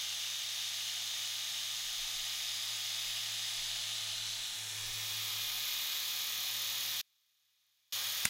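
The source was likely lost from 7.01 to 7.92 s while the path after the break stayed live, an audio dropout to a faint residue. For about 0.91 s the sound cuts abruptly to a faint trace roughly 40 dB down, then snaps back.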